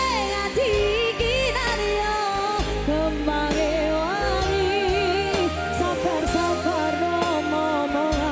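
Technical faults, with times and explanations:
No technical faults can be heard anywhere in the clip.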